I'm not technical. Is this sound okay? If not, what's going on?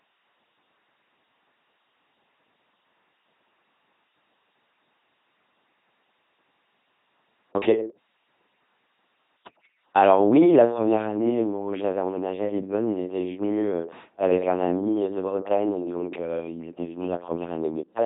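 No, it isn't. The whole thing has been through an LPC-10 vocoder, a very low-rate voice system that rebuilds speech from a buzz or a hiss. That's why it sounds robotic and buzzy, with nothing above about 3.8 kHz.

From 16.40 s to the end there's also channel delay (comb filtering). One side arrives a few milliseconds late, and mixing both together cancels a regular series of frequencies starting near 100 Hz, so that last stretch sounds hollow and phasey.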